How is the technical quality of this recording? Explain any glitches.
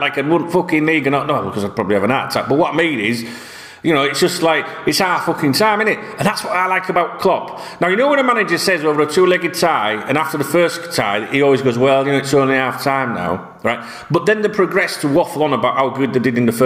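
The recording has one persistent fault: gain pumping, present throughout. The level ducks by around 15 dB under each loud sound, leaving loud and soft parts squashed together. Likely cause: input gain set far too high, with a fast limiter or compressor clamping down on each peak.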